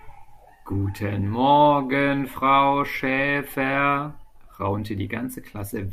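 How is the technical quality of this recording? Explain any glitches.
No technical faults can be heard in this recording.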